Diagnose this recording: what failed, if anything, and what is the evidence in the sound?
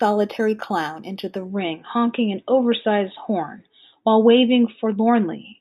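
From 0.0 to 1.5 s the speech sounds dulled on top, with a faint metallic shimmer on sibilants from a mirrored band at 4–8 kHz, roughly 30 dB down. This is imaging from linear upsampling during sample-rate conversion. Straight-line interpolation, which fits an 8 kHz source raised to 48 kHz, leaves spectral copies.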